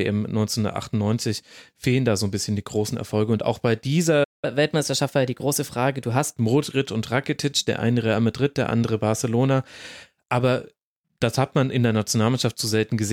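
A speech recording with a playback stall at 4.23 s: the audio drops to silence mid-flow for about 192 ms and resumes at 4.45 s, likely because the player ran short of buffered data or its output thread was briefly blocked. A catch-up at higher speed follows immediately, from 4.45 to 6.36 s. The player works off its backlog by resampling at 1.1 times normal rate, so the speech runs faster and sits about a semitone and a half higher in pitch before dropping back to normal speed and pitch.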